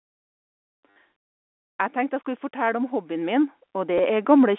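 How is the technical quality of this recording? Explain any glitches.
Two kinds of glitch stand out over the narrow telephone band (roughly 250 Hz to 3.5 kHz): a brief robotic stutter with a later small blip, and a slow rise in level during the second half.

At 0.90 to 0.95 s the audio turns into a short mechanical buzz lasting about 60 ms, and at 3.98 s there is a single tiny click-like hiccup of about 10 ms. Both come from packet loss with the last packet repeated. Packets went missing, and the receiver filled the gap by replaying the last good packet. Those replays seldom line up with the waveform's pitch cycle. The longer run buzzes at around 100 Hz, which fits 10 ms packets.

From about 1.93 s to 4.54 s the whole sound, background included, swells gradually, ending up about 10 dB louder. This is automatic gain rising. The automatic gain control judged the input too quiet and kept turning its gain up over those two and a half seconds, so everything in the signal grows together.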